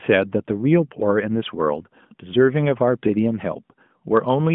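This speech clip has nothing technically wrong with it.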